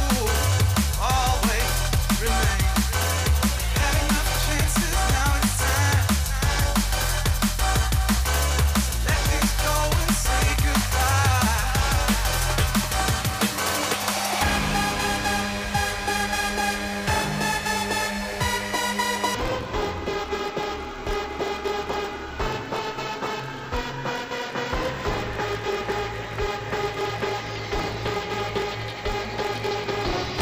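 From 19.35 s to the end, the audio drops an octave and turns doubled and choppy: interleaved audio read as planar, with about 22 ms blocks split into halves that repeat 45.9 times a second.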